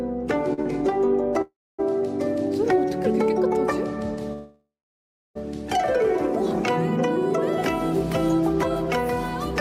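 Two short stalls from a late packet occur, at 0.53 to 0.60 s and 0.62 to 0.68 s. Each holds the last sound about 40 ms too long while the jitter buffer waits. Nothing is lost, and the audio resumes exactly where it paused. Two call audio freezes follow, at 1.42 to 1.80 s and 4.33 to 5.37 s. The sound stretches into a fading buzz or hiss, then falls silent for about 0.24 s and 0.63 s respectively. Playback then resumes without loss, likely because delayed packets emptied the jitter buffer.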